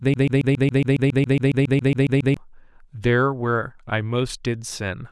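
From the start to 2.37 s, a broken-record loop repeats a 0.14 s fragment of speech about 16 times, likely from a stalled player resending its last buffer.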